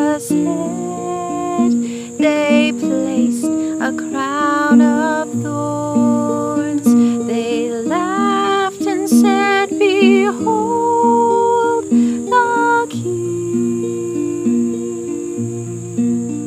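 There are no technical faults to describe in this audio, so there is nothing to place in time order.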